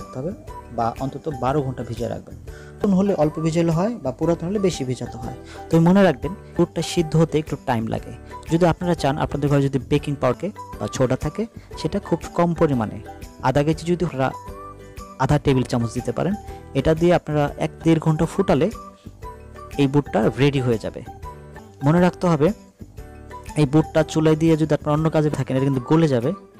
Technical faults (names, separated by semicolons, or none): audio missing between chunks